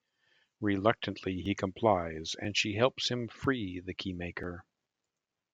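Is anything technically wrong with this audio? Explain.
Yes. Audio missing between chunks occurs at 1.46, 2.45, 3.44 and 4.44 s, once per second. A few milliseconds of speech vanish at each point, likely lost at a 1-second chunk boundary. Each gap sounds like a tiny skip, shows as a waveform discontinuity, and appears as a thin vertical line on a spectrogram.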